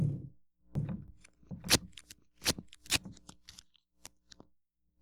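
Between 0.75 and 2.99 s this sound carries a doubled audio track: a full-band copy trailing about 0.7 s behind, a few dB quieter, likely from a second capture path or misaligned edit. Spectrograms show every event repeated at that offset, with the copy starting and stopping abruptly.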